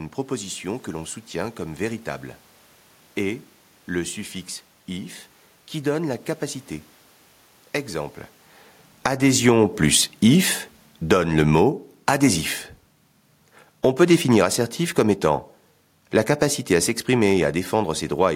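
Automatic gain falling from 8.9 s to 18.3 s in this speech recording: the gain control judged the input too loud or its background noise too strong and eased its gain down by about 13 dB, so the voice and the room noise beneath it sink together, unlike the talker's own shift in distance around 8 s.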